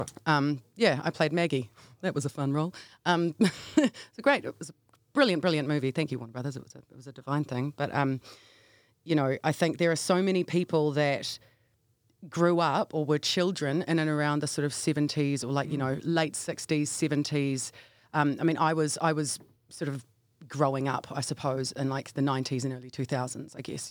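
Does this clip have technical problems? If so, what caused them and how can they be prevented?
No, this clip has no technical problems. There is nothing here to trace to a cause, so no preventive step is needed.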